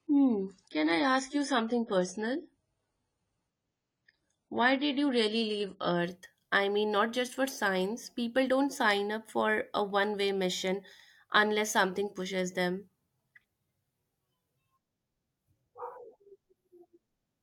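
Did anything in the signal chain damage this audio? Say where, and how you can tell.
Yes. At the playback stage, the adaptive stream started at a low bitrate and stepped up at 6.0 s. From 0 to 6.0 s the speech has nothing above 10 kHz and heavier codec artefacts, which fits about 24 kbit/s AAC. The improvement is then sudden and gapless.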